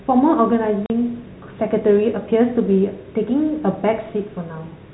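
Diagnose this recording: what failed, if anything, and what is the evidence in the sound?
The failure is in the network stage: packet loss filled with silence. At 0.86 s the speech drops out completely for 40 ms, ending at 0.90 s, with abrupt edges. The gap length fits two consecutive 20 ms packets missing. The receiver had no concealment and inserted silence rather than interpolating, hence the clean hole. The G.711 telephone coding around it shows its expected 4 kHz band limit.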